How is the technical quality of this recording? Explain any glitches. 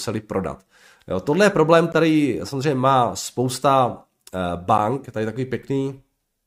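The speech is broken twice by short dropouts, a gap at a join of encoded pieces. One comes at 1.93 s, after "tohle je problém" and before "samozřejmě má spousta", and lasts about 15 ms. The other comes at 4.78 s, just before "tady takový", and lasts about 9 ms. Separately encoded segments were spliced without trimming the encoder's start-up delay and end padding, so a brief hole is heard before the sound resumes where it left off. A waveform would show a flat-line notch with steep, slightly smeared edges, and a spectrogram would show a thin vertical blank stripe.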